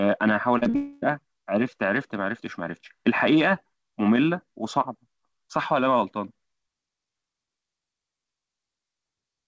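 Between 0.58 and 0.76 s the speech shows short concealed packet loss three times: 0.58–0.64 s, 0.64–0.68 s and 0.70–0.76 s. Each gap of 20 to 40 ms was patched by extending the preceding sound. It is heard as a quick smear or wobble. On a spectrogram it appears as briefly frozen, repeated harmonics.

From 0.76 to 1.04 s comes what is likely a long network dropout. About 260 ms of audio is missing, and the gap is filled entirely by a continued buzz or hiss that fades without ever reaching silence. A waveform shows a smooth, decaying stretch, and a spectrogram shows smeared, featureless bands, all capped at 8 kHz by the G.722 path.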